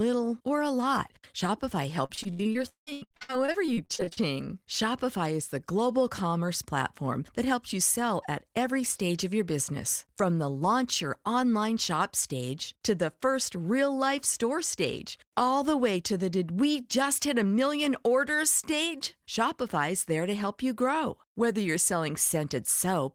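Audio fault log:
2.05–4.19 s, repeated packet loss (robotic sound): over about two seconds, packets dropped out again and again, roughly 23 gaps with the longest near 0.18 s. Each gap was patched by stretching the last sound, so about 43% is concealed, giving choppy, robotic speech.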